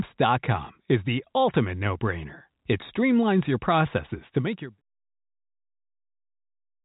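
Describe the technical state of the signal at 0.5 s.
At 0.5 s the audio is intact, with no fault present, and the sound carries the narrow telephone bandwidth of G.711 coding, with nothing above 3.8 kHz.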